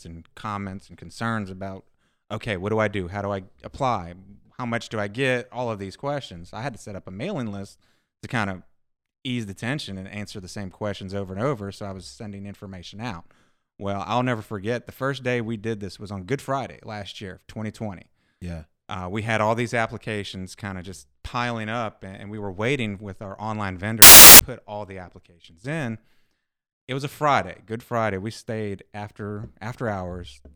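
Right after "waiting with our online", at 24.02 s, the speech drops into a burst of loud, harsh broadband noise that runs until 24.39 s, a bit under 0.4 s, and clears just before "put all the applications". That's samples built from the wrong bytes: the reader misassembles each sample, so the jittery low-order bits end up as the big part of the value. You get a harsh hiss where the speech should be.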